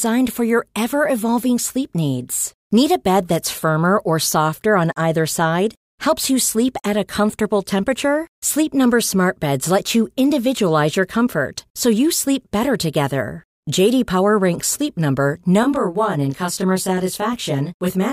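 From 15.63 s to the end, channel delay (comb filtering): one side lags about 20 ms, so mono summing carves fixed notches from around 20 Hz upward. It sounds rough or slightly doubled, not a distinct echo or sweeping flange.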